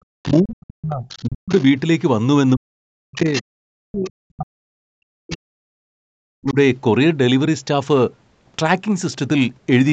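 From 0 to 0.13 s the room background plunges by about 36 dB for a moment, then returns: background gated by the echo canceller, which clamped the microphone while the loudspeaker played.

A faint second voice sits under the talker from 0.23 to 1.63 s, roughly 25 dB down. It surfaces again from 3.33 to 4.1 s much louder, only about 10 dB below the speech, and then as brief scraps at 5.31 to 5.36 s and 6.5 to 6.54 s, quiet at around 20 and 30 dB down. This is the other side's voice leaking through, likely loudspeaker echo the canceller failed to remove.

The talker's own voice dips and breaks up from 0.41 to 1.52 s and again from 2.55 to 6.57 s, at worst by roughly 40 dB, affecting around one second and three seconds respectively. This is speech suppressed in double talk, likely the canceller muting both sides while they overlapped.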